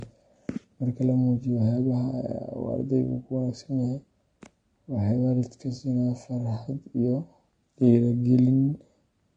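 From start to finish the speech sounds dull and smeared, with a warbling, fizzy texture that is plainly audible. The likely cause is AAC compression, pointing to AAC-LC at about 32 kbps, where each frame's frequency lines are quantised too coarsely to stay clean.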